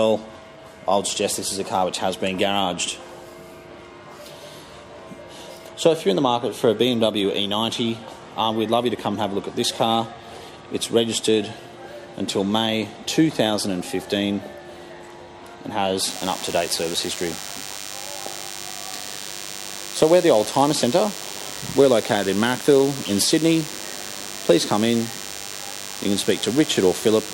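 From 16.04 s to the end, a DECT cordless phone buzz sits under the sound, roughly 10 dB below it. A nearby handset or base pulses every 10 ms, and the circuit rectifies it into a thin 100 Hz buzz rich in harmonics. Mains hum would sit at 50 or 60 Hz instead.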